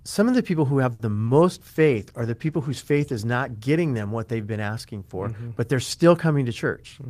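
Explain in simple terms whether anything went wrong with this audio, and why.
A few things went wrong, all typical of a call over a shaky network.

At 0.93 to 1.01 s there's a short stall from a late packet: a piece of data showed up late, so the speech is held for about 60 ms, then carries on.

At 1.26 to 1.30 s there's a short concealed packet loss: 20 ms of audio never arrived, and the receiver patched the gap with a guess, leaving a quick smear.

From 1.56 to 5.50 s there's a call bitrate drop: the connection squeezed the sound into far less data, so the speech turns rougher and duller until it recovers.

From 6.48 to 7.06 s there's a jitter buffer speed-up: the receiver had too much audio queued and trimmed out tiny slices, so the speech runs about 8% faster at the same pitch.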